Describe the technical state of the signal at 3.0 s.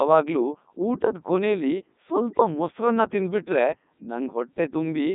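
At 3.0 s the speech is passing through a Codec 2 vocoder, as it does for the whole clip. The decoder does not rebuild the original waveform. It resynthesises the speech from sine waves driven by transmitted pitch, voicing, energy and a coarse spectral envelope. The result here is a heavily robotic, buzzy sound, with a narrow band of roughly 150 Hz to 3.7 kHz, nothing above 3.8 kHz, and damage consistent with the codec's top 3.2 kbit/s mode.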